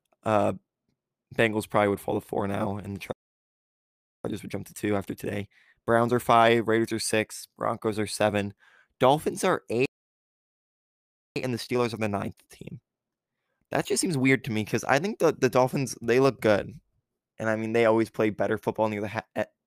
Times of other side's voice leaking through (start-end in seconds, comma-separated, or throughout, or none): none